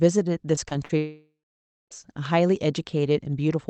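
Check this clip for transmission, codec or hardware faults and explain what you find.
Two kinds of transmission fault are audible in the speech, both network losses on a call path that sounds like Opus at around 32 kbps, with the top end limited to about 8 kHz.

At 0.55 s, 0.69 s and 0.85 s there are brief smears and wobbles, the last about twice as long. This is short concealed packet loss: roughly 20, 20 and 40 ms of audio arrived too late, and the receiver papered over each gap by extending the preceding sound before blending back.

From 0.97 s to 1.93 s the sound turns into a fading continuation of the last sound that decays into about 0.6 s of silence before the speech resumes, with nearly a second of material missing. This is most likely a long network dropout. Nothing arrived, concealment stretched the last sound until it gave out, and playback then picked up later without the lost portion.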